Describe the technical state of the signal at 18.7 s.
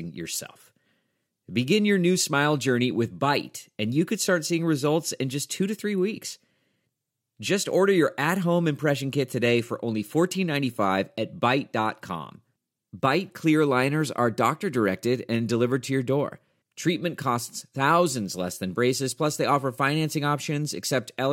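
At 18.7 s the speech signal is intact, with no technical fault present at that moment.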